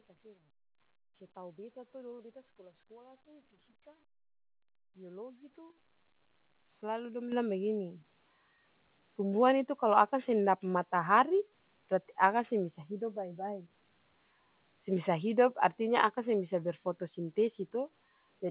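At 7.32 s the call software judged the microphone too quiet and raised the device's input volume in a single step, a microphone volume stepped up event of about 7 dB. Because the change happens at the input, the speech and the background noise jump louder together, instantly, rather than swelling gradually. Within a band that stops at 4 kHz, from the narrowband call path, the rest of the speech simply sits at this higher level.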